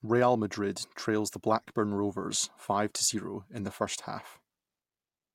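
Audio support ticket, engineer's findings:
Engineer's findings: no audio fault heard in the speech clip, nothing to log against this support ticket.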